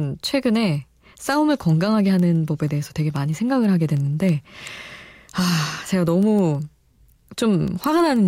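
Word clock ticks run from 0.26 s to 8.16 s beneath the speech, a steady train of sharp clicks of uneven strength about every 0.15 s, some fifty in all. The receiving device runs on its own clock instead of locking to the digital source, and the two clocks differ by something like 150 parts per million. Each time they slip past one another, a single sample is dropped or repeated, leaving a brief tick at that point.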